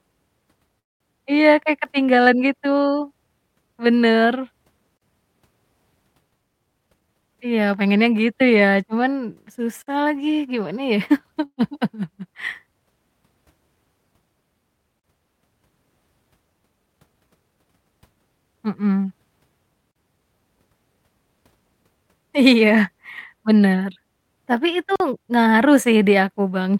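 At 0.79 to 1.03 s a call audio freeze occurs. The last sound is stretched into a fading fill, followed by about 200 ms of silence, likely because delayed packets emptied the jitter buffer. The speech resumes exactly where it stopped, so it is delayed rather than cut.

A gap between chunks follows at 4.97 s. It is a 44 ms hole, and it recurs every 5 s: at 9.83 s just before "lagi gimana ya", at 15.00 s, at 19.91 s, and at 24.96 s between "bener tapi itu" and "ngaruh sih". Each is silence inserted at a chunk join. The regular spacing distinguishes these from the freezes.

From 6.47 to 7.96 s a jitter buffer speed-up runs the speech about 13% fast. Roughly 200 ms is trimmed away in small pitch-period slices, so it sounds hurried while the pitch stays unchanged.

A second freeze comes at 11.45 to 11.72 s, after "lagi gimana ya". It has a brief fill and about 60 ms of silence.

The speed-up returns from 16.86 to 17.63 s at about 15% faster, with roughly 150 ms removed.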